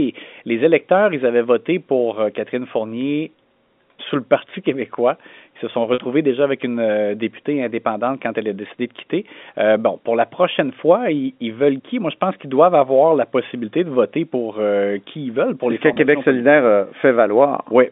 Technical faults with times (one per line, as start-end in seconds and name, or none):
5.94-5.98 packet loss with pitch repetition
15.94-15.96 packet loss with pitch repetition